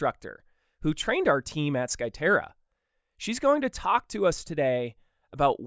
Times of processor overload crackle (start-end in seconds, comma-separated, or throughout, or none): none